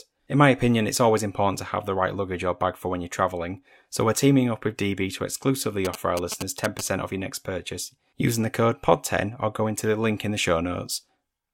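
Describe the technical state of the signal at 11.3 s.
At 11.3 s the speech signal is intact, with no dropout, clipping, glitch or other fault audible at that moment.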